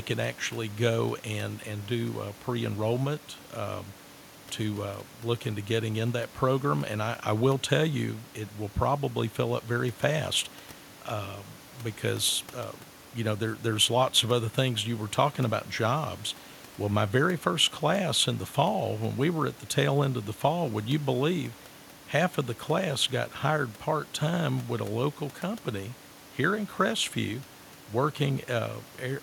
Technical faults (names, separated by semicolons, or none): none